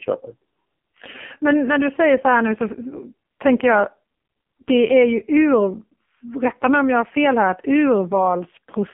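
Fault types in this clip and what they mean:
AMR narrowband mobile codec: the speech runs through the whole clip at mobile-phone quality, confined to roughly 200 Hz to 3.4 kHz with nothing above 3.4 kHz, and the codec damage is heavy. The voice sounds buzzy and synthetic, which fits AMR-NB's low 5.15 kbps mode. A plain telephone band-limit would dull the sound in the same way but leave it natural. Here the voice is rebuilt from a crude vocal-tract model, so it sounds artificial.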